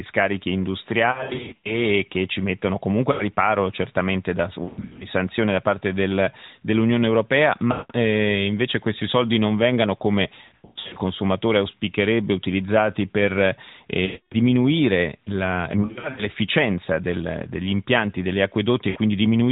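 Lost AMR speech frames occur at 1.12–1.74 s, 3.12–3.23 s, 4.64–5.07 s (between "riparo certamente da" and "sanzioni da parte del"), 7.72–7.92 s (just before "eh invece questi soldi"), 10.36–10.99 s, 14.06–14.35 s (after "auspicherebbe utilizzati per"), 15.82–16.27 s and 18.90–18.98 s. Radio errors corrupted the frames. The decoder then repeated the last good pitch and vocal-tract settings at falling gain, so the sound smears, warbles and sags toward silence before recovering rough. The 1.1, 4.6, 10.4 and 15.8 s stretches are clusters of scattered dropouts, with the longest unbroken run about 100 ms. The 7.7 and 14.1 s gaps are solid losses of about 180 and 260 ms. The narrowband AMR channel carrying it all passes nothing above 4 kHz.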